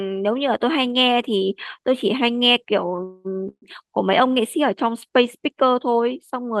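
Short stall from a late packet, 2.96 to 3.00 s: one packet of this speech missed its playout slot, the jitter buffer ran dry, and the receiver held the last sound for about 17 ms until the data turned up. Playback resumed at the same point with nothing dropped. The speech simply runs 17 ms later from there, and the held instant carries a faint buzzy smear.

Call audio freeze, 3.04 to 3.27 s and again 3.49 to 3.64 s: both are likely caused by packets delayed in transit that left the jitter buffer empty. In the first, the final sound is stretched into a fading buzz for about 210 ms with no true silence. In the second, about 133 ms is filled, the last 60 ms of it silent. Each time the speech carries on exactly where it stopped, so nothing is lost, but pauses are inserted.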